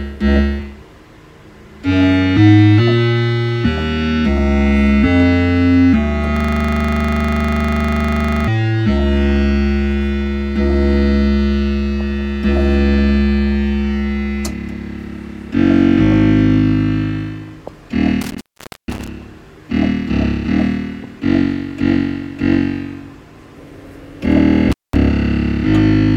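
From 6.37 to 8.48 s a system hang loop takes over. The playback stalled while the hardware kept replaying the same 40 ms stretch of its ring buffer, about fifty times, giving a rigid 25 Hz buzzing stutter. On a waveform it shows as identical blocks tiled end to end, and a spectrogram shows evenly spaced vertical stripes.

Intermittent contact follows at 18.21 to 19.08 s and again at 24.72 to 24.96 s. A loose connection opens for about 0.47 s and then 0.19 s, cutting the sound to faint hiss with crackle at each edge. Waveforms show near-flat gaps bounded by sharp spikes, and spectrograms show dark bands edged by broadband clicks.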